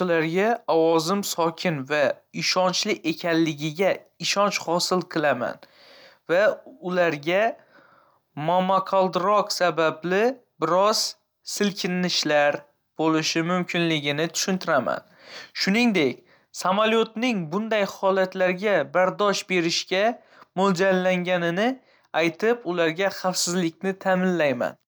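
No technical faults can be heard anywhere in the speech.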